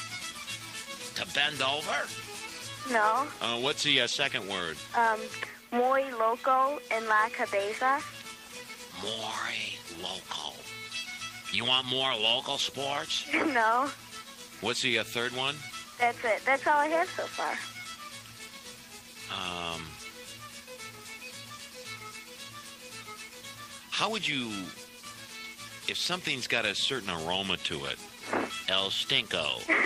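Nothing in the audio stood out as a technical fault on listening.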